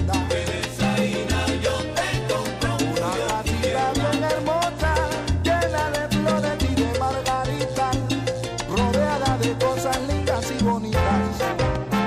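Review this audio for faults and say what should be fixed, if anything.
A steady mains hum runs through the whole clip, start to finish. It sits at 60 Hz, the frequency of a North American power line, with some weaker low harmonics above it. It is loud, roughly ten decibels below the wanted sound, so it is clearly audible throughout. The tone comes from the electrical supply leaking into the signal path. A ground loop between connected devices, or a transformer close to a cable or input, would couple it in. To prevent it, power all equipment from one outlet, keep signal cables away from transformers, and break any ground loop with a DI box or isolation transformer.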